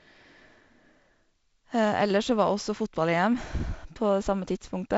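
Nothing goes wrong in this speech clip; it just carries the usual G.722 wideband telephone coding, with the top end gently stopping around 7.7 kHz.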